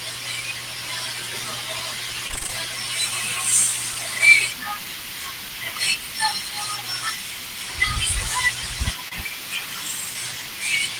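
Speech is heard, and it breaks up twice. From 2.27 to 2.50 s there is repeated packet loss, giving a robotic sound. Audio keeps dropping out in short holes, which sounds like about six separate losses, the longest about 23 ms. Each hole is patched by stretching the preceding sound, so roughly half of that stretch is synthetic fill. The result is choppy. At 9.08 to 9.13 s a short concealed packet loss follows. About 20 ms of audio went missing. The decoder covered it with about 27 ms of continued sound before blending back, leaving a brief smear.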